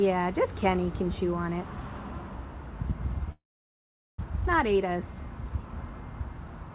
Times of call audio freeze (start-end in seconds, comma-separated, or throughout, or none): 3.32-4.20